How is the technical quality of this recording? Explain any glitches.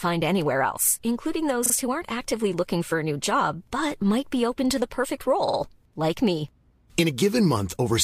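The recording has two repeated-frames stutters. At 1.65 s a 27.6 ms block replays twice, and at 5.47 s a 45 ms block does the same. Duplicated compressed frames make the decoder repeat that slice, and the waveform and spectrogram show identical patterns side by side.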